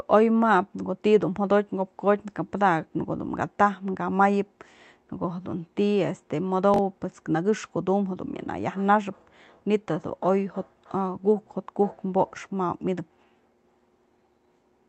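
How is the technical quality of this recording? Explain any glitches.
One glitch stands out in this speech recording, which came through a call codec whose top end stops at about 8 kHz. From 6.74 to 6.78 s, chunks out of order: a 21 ms chunk played one slot late, after its successor. Unlike a dropout, nothing goes missing. Instead, three hard joins produce a brief jumbled stutter.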